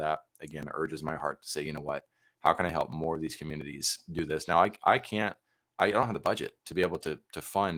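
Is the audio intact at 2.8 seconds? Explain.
No, 2.8 seconds falls inside a run of periodic USB or driver dropouts lasting from 0.17 to 7.64 s. Every 0.115 s something seems to stall the USB bus or audio driver, and roughly 10 ms of audio is skipped outright rather than filled with silence. That happens about 70 times, so you hear a steady train of little ticks or pops riding on the speech, about nine a second, right through that moment.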